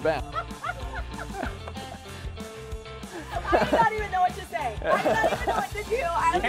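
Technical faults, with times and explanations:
No technical fault can be heard in this audio, whose signal keeps its continuity from beginning to end without any disruption.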